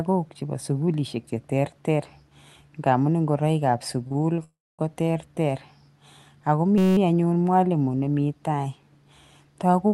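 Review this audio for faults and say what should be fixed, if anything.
Two short stalls from late packets come back to back right after "nka amun ngoroikap", at 4.07 to 4.12 s and 4.12 to 4.17 s. The jitter buffer ran dry and the last sound was stretched by about 31 ms and then 22 ms before playback resumed from the same point. Nothing is lost, and the holds are too brief to become silence, which is what separates them from a freeze. A deeper jitter buffer would absorb these delays.

A call audio freeze follows from 4.44 to 4.81 s. The held sound fades into roughly 250 ms of silence, about 347 ms of inserted time in total, before the audio picks up where it left off. The likely cause is packets held up in transit with the jitter buffer running empty. This is a pause rather than a repeat, and it runs far longer than the stalls. Better network prioritisation or adaptive buffering would reduce it.

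A system hang loop sits between "ako mi" and "anyun mwalimo", from 6.78 to 6.97 s. A 5.33 ms slice repeats exactly 36 times, which fits a 256-sample buffer, and it produces a steady 188 Hz buzz. The exact repetition marks it as a loop, unlike the fading hold of a late packet. Keeping the audio thread and driver from stalling would prevent it.

The Opus call path, band-limited near 12 kHz, carries its normal coding noise.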